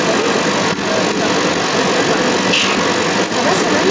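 From the very start right through to the end, there's a second voice sitting alongside the talker, and it's actually a bit louder, roughly 5 dB above the main speech. That's the other side's voice leaking through, most likely because the far end was playing on a loudspeaker and the echo canceller didn't strip it out of the mic. There's nothing above 8 kHz in the call band.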